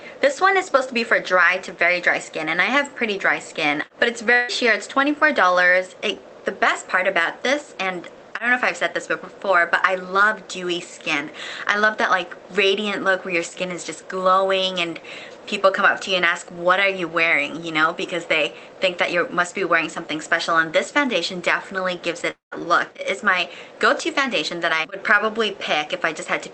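Two gaps, at 4.33 to 4.50 s and 22.30 to 22.53 s, are likely a long network dropout: the last sound is stretched into a fading buzz, seen as a smeared, decaying band on a spectrogram, and the second gap thins to near-flat waveform before sound resumes with a piece missing.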